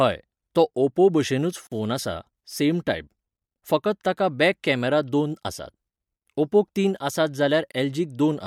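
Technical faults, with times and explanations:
1.67–1.72 s and 7.72–7.74 s, gap at a join of encoded pieces: the speech abruptly drops out for 46 ms after "तो ओपो भशेनूच", then for 24 ms, and resumes where it stopped. Pieces encoded separately, six seconds apart, were joined untrimmed, leaving encoder delay and padding as silence.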